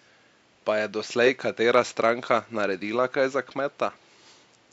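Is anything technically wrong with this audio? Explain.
No, nothing is technically wrong with this audio; the faint room noise sits about 40 dB below the speech and belongs to the recording.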